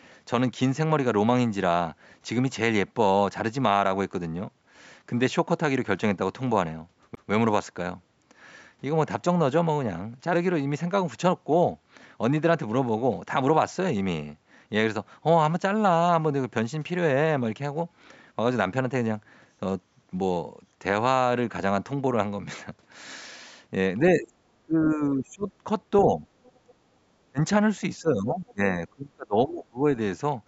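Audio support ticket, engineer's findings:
CD skip, 7.15 s. Brief tick and a very short mute, about 20 ms, then playback resumes at a different point in the audio. Source disc transport: laser tracking was knocked or hit a flaw and jumped to another turn of the spiral. Player mutes during the relock and continues from the wrong position, so the content jumps forward or back by roughly one or more disc rotations.

Speech suppressed in double talk, 24.01–24.38 s, 24.62–25.48 s, 26.05–26.24 s, 26.64–26.69 s, 27.27–27.40 s, 27.98–28.61 s, 28.90–29.85 s. Near-end speech dips or chops out in pieces. Drops range from slight, around 5 dB, to deep, around 30 dB. Longest affected stretches are under a second.

Likely cause: echo canceller on the call path. Far end talking at the same time. Canceller couldn't separate local talker from loudspeaker echo and attenuated both.

Other side's voice leaking through, 26.43–26.70 s. 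A faint second voice, about 35 dB below the main speech, appears in the same stretch of double talk. Likely cause: residual echo the canceller failed to remove. The far end was played on the device loudspeaker and picked up by the mic. Band tops out at 8 kHz, consistent with the call mic chain.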